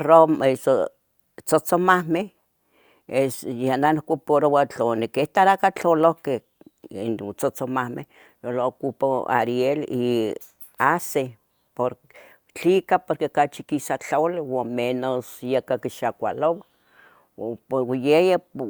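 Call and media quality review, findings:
No faults found: the speech signal stays continuous and stable in level and timing throughout, with no audible defect in the capture, transport or playback path.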